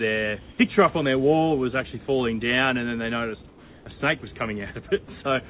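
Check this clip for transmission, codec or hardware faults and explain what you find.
One fault: from 3.48 to 3.86 s, the background becomes comfort noise, likely from discontinuous transmission. The real background, about 26 dB below the loud parts, turns steady, featureless and about 3 dB quieter. The audio is band-limited with nothing above 4 kHz, which fits the narrowband G.711 call path.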